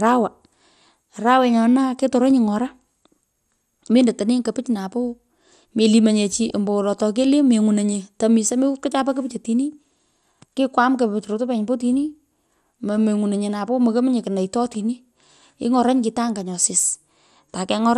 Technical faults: MP2 compression; DAB burbling

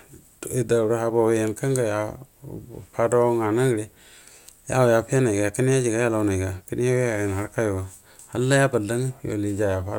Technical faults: none

